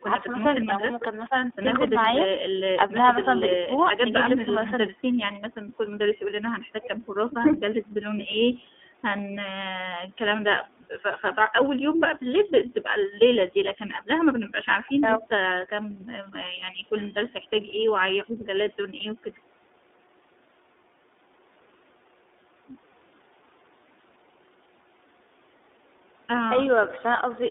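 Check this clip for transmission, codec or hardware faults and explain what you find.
The speech carries one codec fault from start to finish.

iLBC codec, throughout: each frame's excitation is coded independently, which fits the 30 ms, 13.33 kbps mode, and the line passes only about 250 Hz to 3.6 kHz. The result is thin, band-limited speech with a plainly audible rough, synthetic edge.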